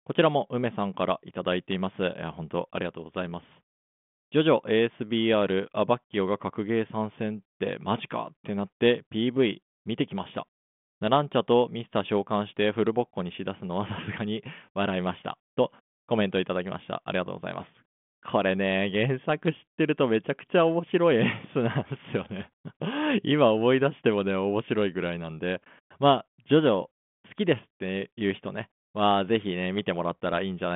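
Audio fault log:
No faults are heard in this speech. The sound carries the narrow telephone band of a 40 kbit/s G.726 ADPCM link, running from about 150 Hz to 3.5 kHz with nothing above 3.8 kHz.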